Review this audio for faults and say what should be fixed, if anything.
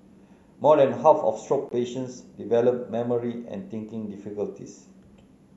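A brief dropout at 1.69 to 1.71 s, an about 21 ms gap with smeared edges: a gap at a join of encoded pieces, where untrimmed encoder delay and end padding remain. Prevent it by trimming each segment's encoder delay and padding, or encoding the speech as one continuous file.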